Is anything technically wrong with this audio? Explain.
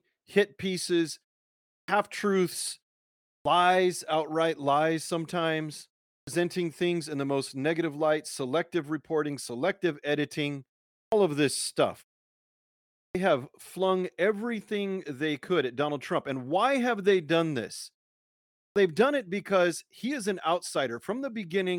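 Yes. There is a clipped start after a pause at 1.77 s (after "hit pieces"), 3.34, 6.16, 10.99 (before "of this stuff"), 13.02 and 18.63 s (before "they've done it because"). Each time, the output path seems to fall asleep during a pause of 0.33 to 1.07 s and needs about 110 to 130 ms to wake, so the opening of the next phrase is cut off and speech starts abruptly. Muted pauses would silence only the gaps and lose no speech, but here the first sounds themselves are missing.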